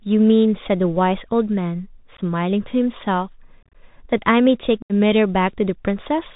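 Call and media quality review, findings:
Bluetooth CVSD headset codec throughout. Speech band-limited to 4 kHz, scratchy s sounds, granular hiss under speech, distortion on loud high content. One-bit delta modulation with adaptive step can't track fast slopes, which fits a 64 kbps CVSD link. Damage plainly audible.

Unconcealed Bluetooth headset packet loss, three events. 2.17–2.19 s: short abrupt hole, around two packets. 3.63–3.75 s: scattered dropouts, longest 30 ms, chopped crackle. 4.82–4.93 s: 75 ms gap, roughly ten packets. Lost voice packets replaced by silence or an idle pattern, hard edges, level dips briefly on recovery.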